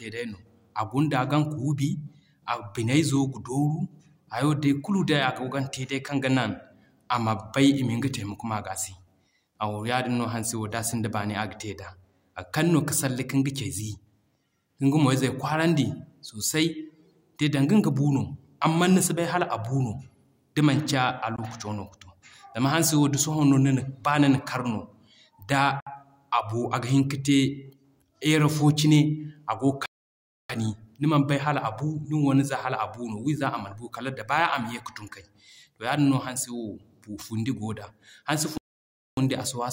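Speech with two kinds of silence. Short gaps at 21.36–21.39 s (about 20 ms, consistent with one lost packet) and 25.80–25.87 s (about 60 ms, roughly three packets) are likely Bluetooth dropouts, showing as sharp-edged blank slivers in the waveform and spectrogram. Longer holes at 29.86–30.50 s (about 640 ms) and 38.58–39.17 s (about 600 ms) are likely playback stalls, where the sound halts mid-flow and leaves wide empty columns before resuming.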